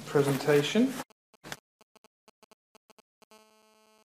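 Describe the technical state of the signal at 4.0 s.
At 4.0 s the signal carries GSM phone buzz, present from 3.31 s to 4.03 s. A nearby 2G handset in a call transmits radio bursts at a 217 Hz repetition rate, and the audio circuitry rectifies those pulses into the signal path. The result is a hard, raspy buzz at 217 Hz, rich in harmonics and unrelated to the programme material, holding steady across the span at about 34 dB below the signal.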